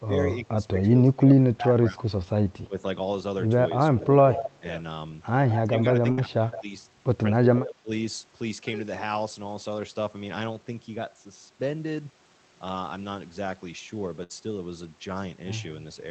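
Speech suppressed in double talk affects this speech recording at 0.0–2.13 s, 2.67–2.78 s, 3.98–4.63 s, 5.65–6.73 s and 7.33–7.90 s. The level dips in patches, by about 10 dB at its mildest and about 20 dB at its deepest (around 6 s), and the sound briefly thins or drops away. The likely cause is an echo canceller that, with both ends talking at once, could not tell the near talker from loudspeaker echo and pulled both down.

Echo leak appears at 4.02–4.56 s, 5.49–5.81 s and 6.51–6.64 s as a delayed copy of the sound trailing the original by 163 ms. It sits about 10 dB below the speech at first and fades to about 20 dB below by the third occurrence. This is likely residual loudspeaker pickup that a canceller failed to remove and sent back down the line.

Burst of packet loss occurs at 6.11–6.19 s and 14.23–14.32 s. Each time, roughly 60 ms of audio is missing, and the receiver papers over the gap by stretching the last sound into a short fading buzz or hiss before the speech jumps ahead with that stretch gone.

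Throughout, the call codec limits the audio to about 8 kHz.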